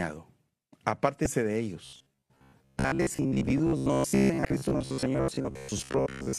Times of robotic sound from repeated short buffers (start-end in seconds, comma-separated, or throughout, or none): 1.85-6.38